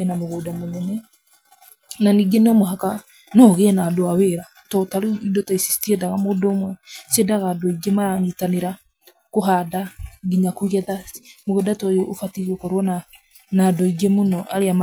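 A speech recording, with nothing technically wrong to report. No fault can be heard at any point in the audio.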